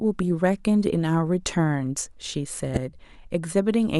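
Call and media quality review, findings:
Corrupt frame decoded, 2.74 to 2.82 s in the speech. Decoder accepted and played a run of compressed frames with flipped bits instead of concealing them. Misread codes and gains pushed energy into the wrong frequency bands. Audible result: one short chirp or burst, about 80 ms long, consistent with a handful of consecutive damaged frames, peaking fairly loud at around -10 dBFS. Probable component: transport or decoder error detection.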